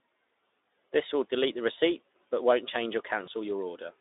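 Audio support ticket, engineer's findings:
VoIP packet loss concealed by the speech codec, 3.25–3.29 s: brief buzzy or noise-like smear that fades rather than silence. Decoder extrapolated last pitch and filter over what sounds like one lost 20 ms frame. Unlike a hard dropout, there is no gap.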